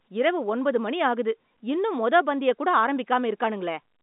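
Nothing in this speech recording sounds faulty.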